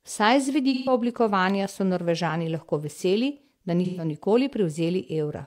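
At 0.73 s the speech turns smeared and noisy until 0.92 s. This is AAC frame loss with concealment. Coded frames went missing, and the decoder patched the gap from the last good spectrum. The patch has the right energy but the wrong fine detail, so it sounds phasey. The missing stretch fits three lost frames, about 128 ms of audio. The same blur returns from 3.85 s to 4.05 s, again short enough not to fade out.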